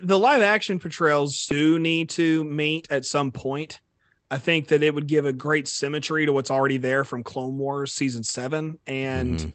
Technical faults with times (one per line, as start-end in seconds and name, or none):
1.51 skip ahead
1.60-2.82 jitter buffer speed-up